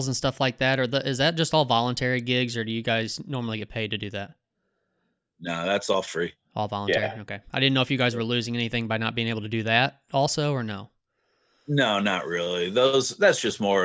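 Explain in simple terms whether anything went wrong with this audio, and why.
Nothing went wrong here: the speech carries on steadily from beginning to end, and there's no technical problem to point at.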